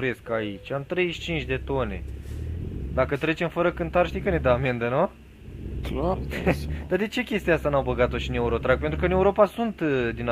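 At 6.13 s, compressed frames are skipped. About ten frames, roughly a fifth of a second of audio, never get decoded, so the sound jumps forward. Unlike a dropout there is no silent gap.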